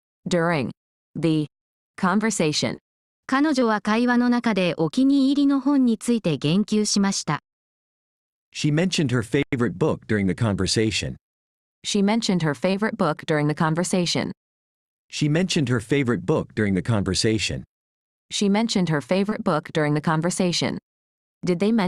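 Short concealed packet loss occurs at 2.76–2.80, 3.60–3.63, 12.71–12.75 and 19.29–19.33 s. Each time about 20 ms never arrived, and the decoder extended the preceding sound before blending back. This produces a brief smear or wobble rather than the hard silence and click of an unconcealed dropout.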